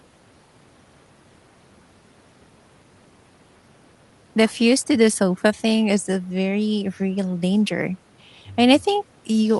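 No technical faults are audible anywhere in the recording.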